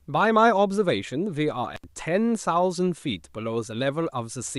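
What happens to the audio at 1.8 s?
Between 1.75 and 1.84 s the speech drops out for about 73 ms in an intermittent contact fault: a loose cable or plug briefly breaks the signal path, so the sound cuts off with crackle at each edge and only faint hiss remains during the gap.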